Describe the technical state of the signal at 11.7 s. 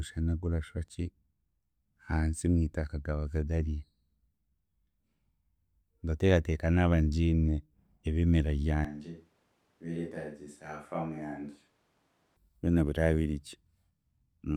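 At 11.7 s the speech sounds roomy, hollow and thin, roughly 10 dB quieter, with room noise rising; likely a switch to a distant microphone, spanning 8.85 to 12.37 s.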